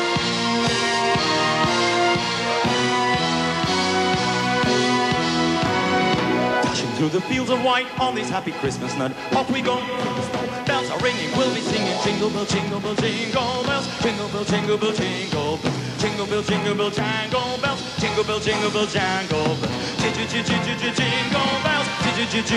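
Nothing is technically wrong with this clip.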